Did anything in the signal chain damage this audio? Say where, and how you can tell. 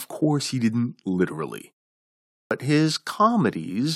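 Yes, at the playback stage, where the output device shows a clipped start after a pause. Following a gap of 0.68 s, the speech resuming at 2.33 s comes in abruptly out of silence, its opening sounds missing until 2.51 s, roughly 180 ms swallowed. The device powers down or loses lock during the quiet stretch and needs that time to come back, so the first part of the next phrase never reaches the output. The pause itself simply goes silent.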